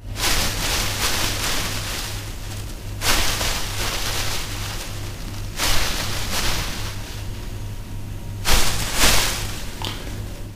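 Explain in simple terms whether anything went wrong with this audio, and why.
Sample clock jitter runs through the whole clip. The converter's timing wobbles by about ten microseconds, adding gritty hiss whenever the sound gets loud or bright.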